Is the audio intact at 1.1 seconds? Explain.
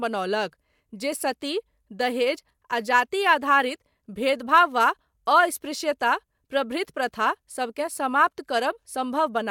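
Yes, the speech at 1.1 seconds plays through cleanly, with no dropout, click, distortion or other fault at that moment.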